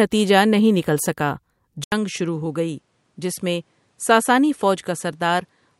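At 1.84 s, right after "نہیں نکل سکا", the speech breaks off for about 80 ms and resumes through what is likely an input switched to a poorer device. From there to the end, nothing remains above 11.6 kHz, the level sits about 5 dB lower, the tone changes, and a faint new noise floor appears about 45 dB down. A simple low-pass filter or codec bandwidth drop would dull the top without the gap, level shift or fresh background noise.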